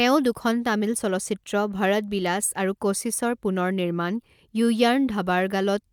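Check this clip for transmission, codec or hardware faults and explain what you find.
Nothing stood out on listening to this speech recording.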